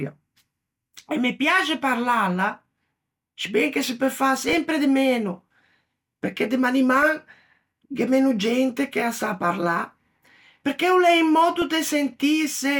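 Speech, hit by DAB burbling. Under weak reception, bit errors slip past error correction into the MP2 audio, corrupting samples, which put short noise blips in single sub-bands, and scale factors, which make sub-bands leap in level for up to a frame. This produces burbling at 4.49 to 4.58 s, between "che se peu fâ" and "de meno", at 7.02 s after "perché de", and at 11.62 s after "perché o l'é un".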